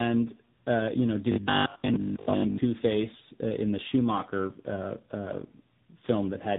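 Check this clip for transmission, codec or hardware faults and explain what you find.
One fault runs through the whole clip: tandem speech coding. The speech passed through two speech codecs in a row, each re-encoding the previous one's decoded output, which fits an ADPCM stage followed by a low-rate AMR-NB stage. Nothing sounds above 3.8 kHz. The result is rough, muffled, warbly speech whose damage compounds beyond what any single narrowband codec would produce.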